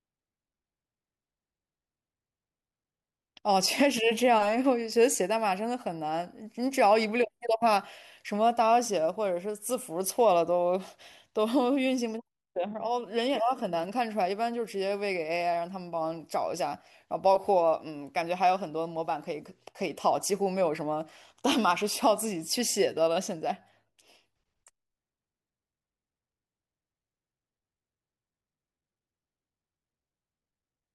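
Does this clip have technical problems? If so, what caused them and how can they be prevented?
No, there are no technical problems in this clip.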